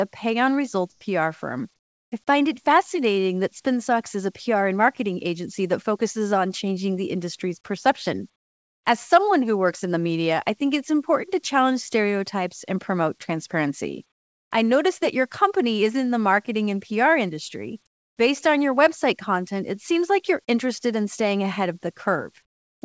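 In six pauses the room tone turns into a flat, featureless hiss and drops in level: 0.92–1.01 s after "a pay on results" (about 3 dB), 1.76–2.12 s (about 12 dB), 8.36–8.84 s after "changing the industry's perception", 14.12–14.51 s between "stereotypes and promote transparency" and "I noticed that your", 17.87–18.17 s (each about 18 dB), and 22.46–22.82 s (about 25 dB). This is comfort noise in place of the background, likely from discontinuous transmission. The sender stopped sending in the gaps, and the receiver filled them with steady synthetic noise.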